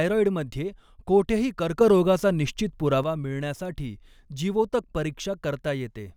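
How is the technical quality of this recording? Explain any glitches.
The recording has one clear glitch, a sudden gain jump in the speech. From 1.81 s to 3.04 s, the level, background noise included, steps up by about 6 dB at once and drops back just as abruptly. This is likely a digital gain setting applied without a ramp. On the waveform the envelope forms a raised block with vertical edges, and the spectrogram shows that whole stretch uniformly brighter.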